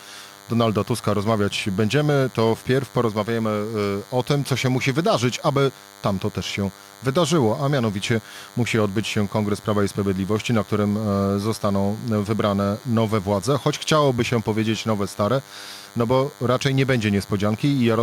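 DECT cordless phone buzz runs through the whole speech clip. A nearby DECT handset or base station transmits a brief radio burst 100 times a second, and the audio circuit rectifies each one, producing a steady, thin 100 Hz buzz rich in harmonics, sitting roughly 25 dB below the speech.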